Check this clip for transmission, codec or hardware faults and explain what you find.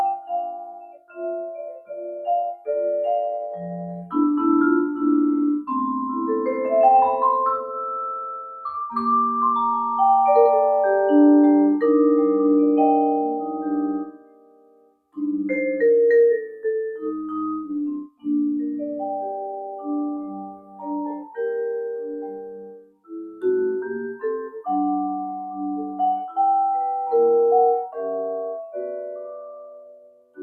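One fault is present throughout, with seven sharper episodes of it: a speech noise suppressor is processing non-speech material.

Noise suppressor applied to music or sounds: across the whole clip, a suppressor tuned for speech treats steady tones, ambience and decay as noise. Its gain swings by around 10 dB, so onsets pass while sustained parts sag, giving an audible pumping, fluttering and thinning of the sound.

Sound cut by the noise suppressor: at 0.16–2.68 s, 3.39–4.05 s, 14.04–15.17 s, 17.94–18.27 s, 20.19–21.36 s, 22.02–23.43 s and from 29.66 s to the end, the suppressor classifies the sound as noise and pulls it down harder. The drops reach about 20 dB, except about 6 dB at 3.39 s and about 14 dB at 20.19 s. Held and fading material sinks or has its tail cut off.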